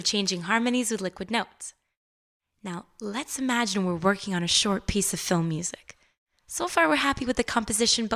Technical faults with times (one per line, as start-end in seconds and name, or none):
none